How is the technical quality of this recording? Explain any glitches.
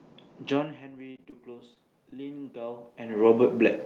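The recording has three kinds of glitch: a slow gain swell, a short stretch of robotic packet loss, and two brief concealed dropouts, all on top of ordinary room noise.

Automatic gain rising, 0.52 to 3.43 s: after the talker drops back around half a second, the input falls about 16 dB. The gain control climbs about 8 dB over nearly three seconds, so voice and room noise swell together. On a waveform, the envelope and noise floor rise steadily.

Repeated packet loss (robotic sound), 1.11 to 1.34 s: four gaps, the longest 31 ms, were patched by extending the previous sound, and the patching covers 38 percent of this stretch. It sounds choppy. A spectrogram shows smeared, repeated harmonic slices broken by abrupt seams.

Short concealed packet loss at 1.74 s and 2.10 s: each time, about 20 ms failed to arrive, and the receiver filled the hole by continuing the last sound before blending back. 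Each one is heard as a brief smear or wobble. It appears as a thin stretched band with a small discontinuity in the waveform.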